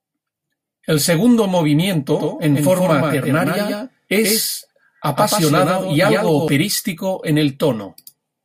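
From 2.14 s to 6.48 s the speech is heard twice. This is a doubled audio track. A second full-band copy trails the original by roughly 150 ms and sits a few decibels quieter. It adds no reverb tail or room colour. It cuts in abruptly at 2.14 s and drops out just as sharply at 6.48 s. The likely cause is the same signal being captured again through a slower path and mixed back in.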